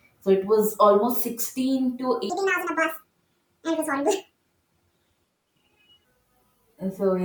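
A speech clip with a section at the wrong speed: from 2.30 s to 6.05 s it plays 1.67 times too fast, pitch jumping up by around ten semitones, likely from a resampling or clock mismatch. On a spectrogram the harmonics and formants step abruptly upward and syllables squeeze closer together.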